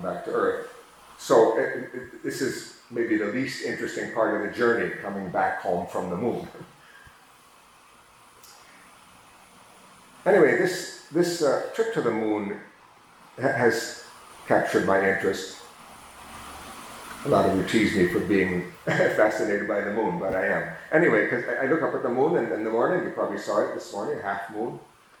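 No dropouts, clicks, distortion or other technical faults can be heard anywhere in the recording. The sound carries on evenly from its first moment to its last.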